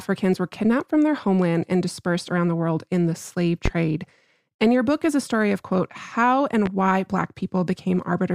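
At 3.66 to 3.69 s a single loud pop stands well above the speech, peaking very roughly 15 dB over it. A second, weaker pop at 6.66 to 6.69 s sits roughly 10 dB above. Each is a brief thump lasting a few hundredths of a second, likely from a voltage pulse such as static or a switch entering the chain. Unlike a dropout or glitch, the speech continues unbroken beneath each pop.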